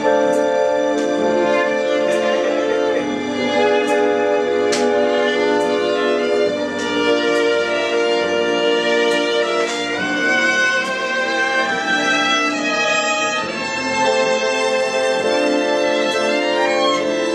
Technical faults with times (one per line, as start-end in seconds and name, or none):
12.54-14.54 adaptive stream at a lower bitrate